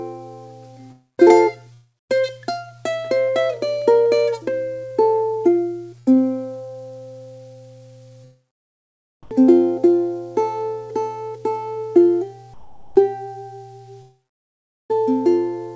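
The audio has come through a call codec, and with nothing above 8 kHz in the spectrogram it fits a G.722 wideband link at 64 kbps. Three gaps sound like long network dropouts, likely caused by the connection stalling, at 0.92–1.20 s, 1.74–2.11 s and 14.02–14.91 s. In each, the last sound is stretched into a short fading buzz or hiss and then gives way to near silence for about 170 ms, 250 ms and 770 ms respectively. About 260 ms, 360 ms and 880 ms of material never arrive, so the sound picks up further along. On a spectrogram each shows as a smeared, repeating continuation that thins into a blank band. In the waveform it is a decaying tail followed by a flat line. A shorter burst of packet loss at 5.99–6.17 s removes about 80 ms. The receiver holds and fades the preceding sound for roughly 70 ms before the audio resumes further on. It appears as a brief blurred, level-dropping patch with a discontinuity at its end. 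Twice the real background is swapped for comfort noise in place of the background. This is likely the sender's silence detection switching to discontinuous transmission and the receiver generating smooth synthetic noise. It happens at 9.23–9.31 s, about 4 dB quieter, and at 12.54–12.96 s, about 9 dB quieter. On the spectrogram the textured background turns into an even, featureless wash, and in the waveform there is a visible step down in the noise floor.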